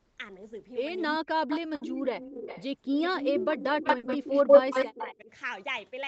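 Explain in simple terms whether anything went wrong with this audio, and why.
Several things went wrong, all typical of a phone or video call.

Echo leak: a delayed copy of the speech comes back at 1.10–1.17, 1.49–2.67 and 2.83–3.51 s, trailing by about a quarter second. From 3.78 to 5.10 s it trails by about 0.13 s and gets louder than the speech itself. The likely cause is a loudspeaker whose echo canceller didn't fully remove its own sound.

Speech suppressed in double talk: at 1.12–1.47, 3.58–3.87 and 4.90–5.30 s, the speech dips or drops out in pieces. Both sides were likely talking at once, so the canceller turned down both its own talker and the echo.

Burst of packet loss: at 1.75–1.84 and 3.97–4.06 s, the sound is briefly stretched into a fading buzz or hiss, then resumes with a short piece missing.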